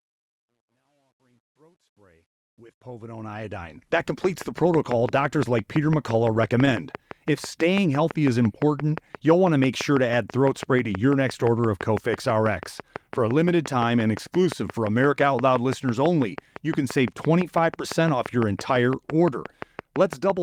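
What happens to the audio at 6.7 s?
At 6.65 to 6.74 s there is a short concealed packet loss. About 20 ms of the speech never arrived in time. The decoder covered roughly 13 ms of the gap by carrying the last sound forward, from its pitch where it was voiced and as shaped noise where it was not, then blended back into the real signal. The result is a brief smear or wobble, and the speech ends up stretched by about 10 ms. On a spectrogram, the harmonics or noise band run flat and slightly blurred for that instant. The waveform shows a repeated cycle where the natural variation stops.

The same moment also falls inside a train of clicks that runs from 4.24 s to the end of the clip. Sharp, near-identical pulses arrive regularly at about 5.9 per second, including in pauses, and peak around 10 dB above the speech. They are heard as steady ticking. The likely cause is electrical interference or a faulty connection or power supply. 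The spectrogram shows evenly spaced thin vertical broadband lines, and the waveform shows matching narrow spikes.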